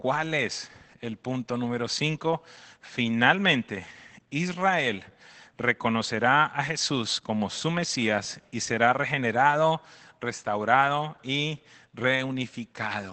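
From start to finish the speech carries Opus voice compression, and it's plainly audible. Nothing survives above about 8.5 kHz, and the coarse SILK-style excitation coding leaves it muffled, a bit hoarse and faintly robotic, which fits a low bitrate of around 12 kbps.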